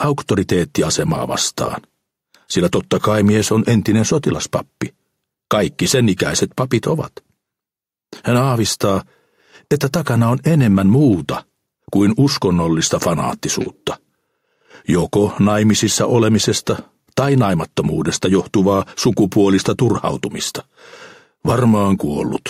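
Gain pumping runs through the whole clip: the gain ducks by roughly 5 dB under loud sounds, likely an over-driven input hitting a fast limiter.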